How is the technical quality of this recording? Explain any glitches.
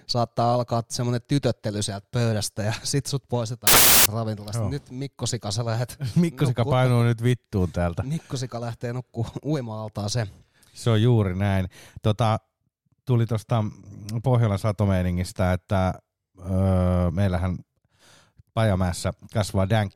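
The recording has one clear glitch, a short burst of corrupted samples. From 3.67 s to 4.06 s, right after "pöydästä ja sit sut", the samples are built from the wrong bytes for about 0.39 s. Each sample's bytes are combined in the wrong order or with a one-byte offset, so the rapidly changing low-order bits end up as the most significant part of every value. The speech is replaced by loud, harsh broadband noise for the duration.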